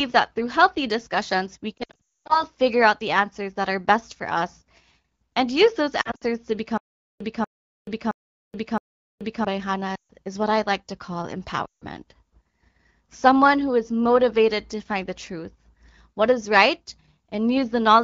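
From 1.77 to 2.45 s, lost AMR speech frames break up the sound: about 400 ms of frames failed their checks across a 520 ms stretch, with the longest run 240 ms. The decoder repeats its last good pitch and vocal tract settings at falling gain, so the sound drops to near silence within two frames. On a spectrogram this appears as harmonics that dim quickly into a gap. The waveform's envelope sags before recovering weak and rough. The same concealment recurs briefly from 6.01 to 6.24 s, just after "and use those", with 120 ms lost over 200 ms.

From 6.78 to 9.45 s comes stutter with silent gaps, likely from a stalled player or stream retrying. A 0.24 s burst plays four times, every 0.67 s, with 0.43 s of digital silence between. The spectrogram shows identical repeated blocks separated by blank columns, and the waveform flatlines in each gap.

Lost frames return from 9.95 to 10.13 s, just before "is what I like", where 140 ms is concealed. 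They return again from 11.65 to 11.86 s, right after "I like to call", with 160 ms lost. Both produce short drops to near silence against the AMR wideband (HD Voice) codec's clean band limit near 7 kHz.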